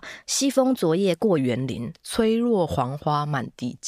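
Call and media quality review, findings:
Wrong sample rate, 0.00 to 1.38 s: speech slightly high and hurried, about 1.09x speed, pitch up roughly 1.5 semitones. Probable playback/resampling stage; fits 44.1 kHz audio clocked out at 48 kHz unconverted. Pitch and tempo rise together, unlike a pitch shift or time-stretch.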